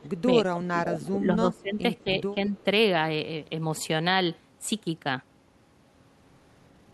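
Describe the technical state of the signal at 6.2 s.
At 6.2 s the speech signal is intact, with no dropout, clipping, distortion or other technical fault audible at that moment.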